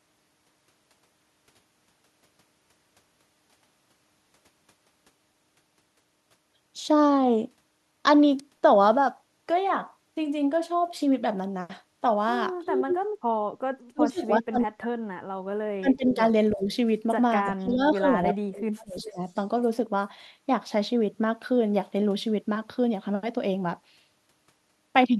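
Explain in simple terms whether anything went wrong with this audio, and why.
Echo leak at 12.66–12.99 s, 15.95–16.15 s, 17.45–17.75 s and 18.99–19.39 s: a copy of the speech returns 0.35 s late, loud the first time and faint later. Likely one side's loudspeaker sound reached its microphone and wasn't fully removed.

Speech suppressed in double talk at 13.93–14.99 s, 15.79–16.68 s and 17.51–19.2 s: the talker's speech dips, nearly vanishing in the first stretch. This is likely because both sides spoke at once, and the echo canceller muted the real speech along with the echo.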